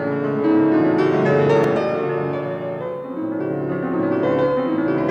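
A single brief click at 1.64 s is a repeated buffer: one piece of about 2.9 ms, consistent with a 128-sample buffer, played twice because new audio arrived late.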